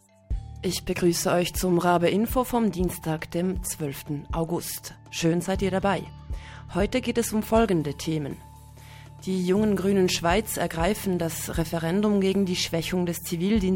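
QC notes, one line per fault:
0.0 to 9.63 s, crude rate conversion. A gritty, inharmonic fizz rides on the sound and grows with loud and bright passages. The rate change was done by plain linear interpolation between samples, with no filter. The character fits a 48 kHz to 44.1 kHz change. The interpolation error repeats in a fixed pattern set by that ratio. It makes shifted, inharmonic copies of the source. That error sits roughly 30 dB below the signal.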